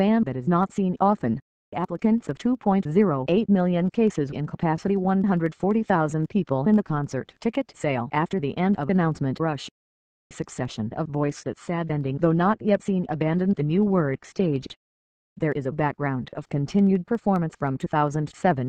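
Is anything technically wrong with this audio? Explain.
Yes. From 11.24 to 15.24 s the adaptive stream drops to a lower bitrate, switching without any gap when the connection slows. For those four seconds codec artefacts rise, consistent with a fall from roughly 96 to 32 kbit/s AAC.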